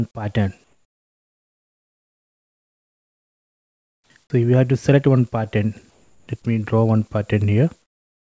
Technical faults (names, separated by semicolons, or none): jitter buffer speed-up; comfort noise in place of the background